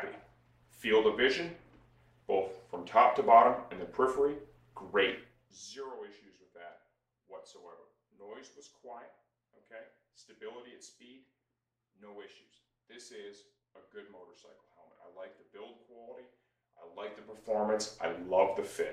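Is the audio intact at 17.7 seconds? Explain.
No. Zipper noise runs from 16.8 to 17.81 s: a roughly 20 dB level change moves in unsmoothed steps, about a hundred a second, adding a rapid ticking buzz.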